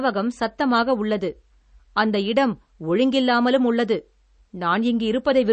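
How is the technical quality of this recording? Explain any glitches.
The recording has one clear technical problem, present throughout the speech: damage that points to MP3 compression. Nothing is heard above 8.3 kHz, so the top end is sheared off at a fixed frequency, and the sound is plainly watery and swirly, with metallic chirps on s sounds and smeared onsets. That likely comes from encoding at a starved bitrate, which fits roughly 32 kbps: the encoder runs short of bits, discards the treble and zeroes weaker frequency lines, which then flicker in and out from frame to frame. A simple low-pass filter would dull the sound just as sharply but stay smooth; it's the bubbling, chirping texture that marks a codec.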